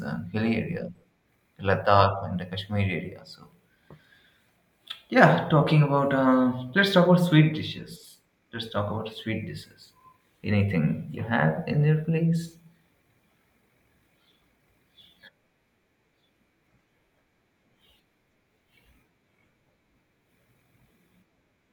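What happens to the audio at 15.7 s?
Nothing goes wrong at 15.7 s: the speech there comes through intact, with no dropout, click, distortion or other fault.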